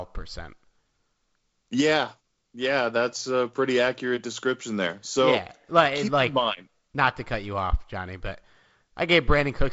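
Speech clip: no faults present.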